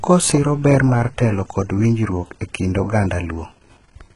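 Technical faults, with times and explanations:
Throughout, HE-AAC compression (likely cause): the speech carries heavy codec damage, with nothing above 11.1 kHz, fitting a very low bitrate near 12 kbps. The treble is rebuilt from copied lower bands, so harmonics misalign above the crossover and s sounds turn gritty and lispy.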